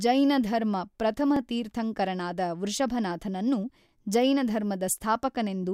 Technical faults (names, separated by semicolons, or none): overlapping chunks